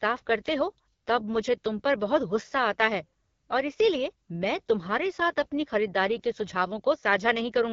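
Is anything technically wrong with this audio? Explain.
Yes. Throughout, AMR wideband (HD Voice) codec damage: raspy, rough speech with nothing above 7.5 kHz, consistent with a low rate near 8.85 kbit/s starving the pulse-driven speech model.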